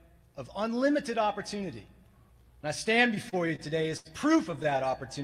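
The audio stutters from 3.15 to 4.07 s and again from 4.51 to 4.94 s. These are repeated stalls. Packets arrived late, so the jitter buffer kept running dry. The receiver stretched the last sound through each wait, up to 81 ms. Nothing is lost, but playback drags.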